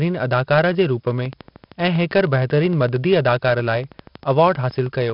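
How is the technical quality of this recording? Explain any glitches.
Quality is poor: heavy codec grit runs through the whole speech recording, and a steady train of clicks covers nearly all of it after the first second.

4-bit ADPCM compression affects the entire clip. Each sample is stored as a coarse 4-bit step from a predicted value, so the rounding error becomes broadband grit that rises and falls with the speech, loudest on strong syllables and harsh on sharp onsets where the step size lags. Nothing reaches above 5.3 kHz, which suggests a low sample rate near 11 kHz and a rate around 44 kbps. The dullness comes from that low rate. Unlike steady background hiss, this grit disappears in the pauses.

A train of clicks starts at 1.11 s, just after "जे रूप", and runs to 5.11 s. It is about 50 near-identical clicks at a regular 12.8 per second, peaking about 5 dB above the speech. Because the pulses are evenly spaced and the same shape, this is likely periodic interference or a struggling interface, not random crackle. 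Unlike the codec grit, the ticking stays just as loud in the pauses.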